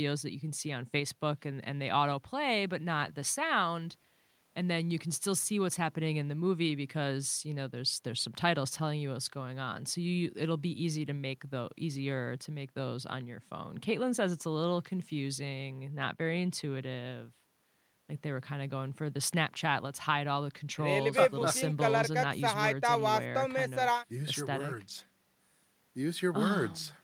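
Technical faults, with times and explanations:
Nothing stood out as a technical problem on listening to the speech in this recording.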